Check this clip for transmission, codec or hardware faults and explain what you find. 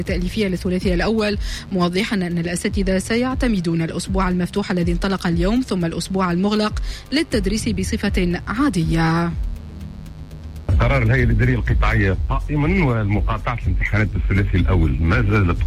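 One hardware fault runs through the whole clip: mains buzz. A steady, raspy buzz sits under the sound from start to finish, roughly 25 dB below it. Switching spikes tied to the 50 Hz supply leak into the signal path. This happens twice per cycle. It produces a dense stack of 50 Hz harmonics reaching into the kilohertz range. That is why the buzz sounds gritty rather than like a pure hum.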